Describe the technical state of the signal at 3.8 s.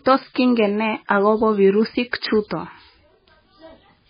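At 3.8 s it's the heavy MP3 compression that runs the whole clip: nothing above 5 kHz, and weak bands flicker into a watery swirl, likely from an encoder squeezed near 16 kbps.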